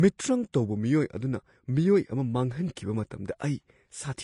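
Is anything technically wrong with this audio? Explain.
Yes. The speech has plainly audible codec damage throughout, most likely from Vorbis compression at a bitrate around 33 kbps. Nothing is present above 10.6 kHz. The treble is quantised so coarsely that its detail turns into grainy hiss, roughening the voice's tone. Unlike a simple low-pass filter, the band below the cut-off is also noisy and granular, not just dull.

There is pre-echo at 0.53 s and 2.75 s. Each time a sharp attack fell late in a transform block, so the block's quantisation noise spread backward, about 15 ms and 13 ms respectively. A short hiss leads each onset and softens it. Unlike a click or dropout, the noise comes before the attack and fades into it.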